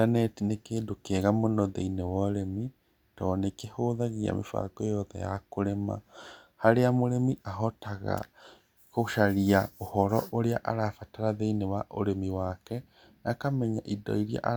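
Listening to the speech recording, nothing stood out as a technical problem at any point.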